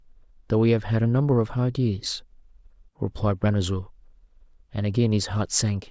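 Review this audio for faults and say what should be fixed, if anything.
No faults; nothing to fix.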